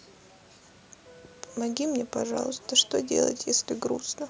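Nothing goes wrong anywhere in this bit of speech; it's just the usual call microphone processing at work, trimming the lowest bass and leaving nothing above 8 kHz, which is exactly what you'd expect.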